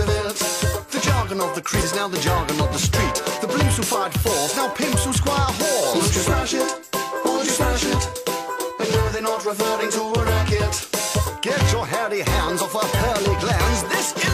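At about 1.77 s there's damaged data in the compressed stream, lasting roughly 60 ms to 1.83 s. A stretch of the encoded file got mangled, so the decoder misreads those frames, loses sync and hunts for the next header, leaving a brief glitch in the sound.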